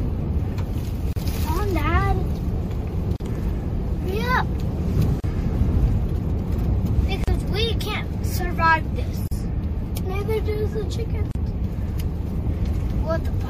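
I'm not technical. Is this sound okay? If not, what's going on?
No. Throughout the clip the sound has a watery, swirly quality, with sharp starts blurred. This is likely MP3 compression at a low quality setting, where the encoder discards the highest frequencies and faint detail to save space.

There are also brief dropouts of silence, each under a twentieth of a second, at 1.13, 3.16, 5.2, 7.24, 9.28 and 11.31 seconds, one every 2 seconds. These are gaps at a join of encoded pieces. The audio was compressed in separate 2-second chunks, and the silence each chunk carries at its edges was left in when they were joined.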